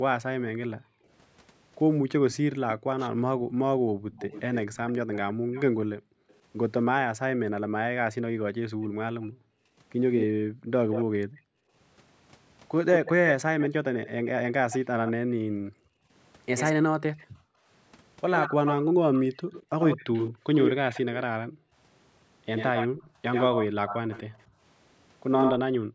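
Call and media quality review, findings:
Speech suppressed in double talk. Level dips and drops out in pieces across the whole clip, roughly 10 s in total, deepest about 40 dB. Likely the echo canceller, unable to separate near talker from loudspeaker echo during overlap, attenuating both.

Echo leak. Delayed copy of the voice audible at 2.31–6.34 s (291 ms, about -15 dB), 8.82–11.05 s (186 ms, about -10 dB), 12.94–25.52 s (86 ms, about -5 dB). Likely residual loudspeaker pickup passing the canceller and returning. Delay shortening, echo strengthening over time.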